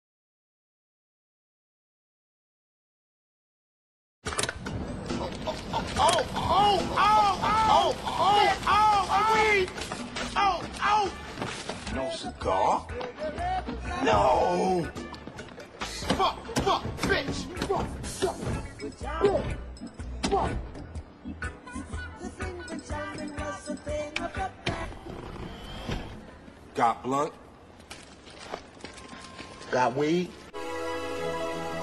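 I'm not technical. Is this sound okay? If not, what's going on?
No. From about 5.95 to 9.43 seconds there's a doubled audio track: a second, identical copy of the sound plays about a second and a half behind the first and at roughly the same loudness. It starts and stops abruptly. Unlike a natural echo, it doesn't fade away or sound roomy. It's likely from the same audio being picked up twice, once through a slower route.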